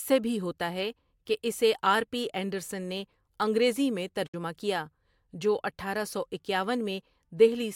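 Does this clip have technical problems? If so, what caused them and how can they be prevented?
Yes. A digital broadcast dropout occurs from 4.26 to 4.34 s, after "انڈرسن نے انگریزی میں" and before "کیا جو اٹھارہ سو". The speech fades out over 8 ms, then goes silent. The receiver muted on bad frames, losing 64 ms, which fits two dropped frames. A stronger signal, better antenna placement or more error protection would prevent it.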